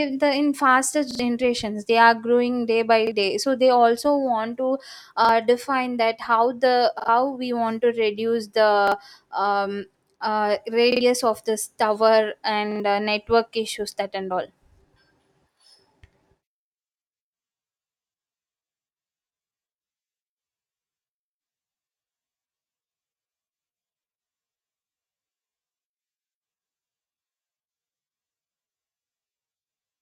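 Short stutters break up the speech seven times. The same slice of about 43 ms sounds again at each one, with a hard join at every repeat. It plays three times in a row at 1.11–1.20 s, 7.00–7.08 s, 10.92–11.01 s (just before "of this tower") and 12.72–12.80 s. It plays twice at 3.07–3.12 s, 5.25–5.29 s (after "they also want to") and 8.88–8.92 s (after "we want to reduce"). These are repeated buffers. New audio did not arrive in time, so playback replayed the last block, which fits a 2048-sample buffer. Around 40 to 100 ms of the real speech is lost at each stutter.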